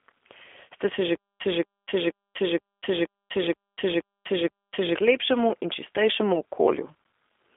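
Speech carried through a G.729 codec at 8 kbit/s, band-limited to roughly 300 Hz–3.5 kHz with nothing above 3.6 kHz, giving plainly audible rough, synthetic coloration throughout. From 1.15 to 4.95 s there is a stutter with silent gaps: a 227 ms fragment repeats eight times, each followed by 248 ms of digital silence, likely from a stalled stream replaying its last buffer.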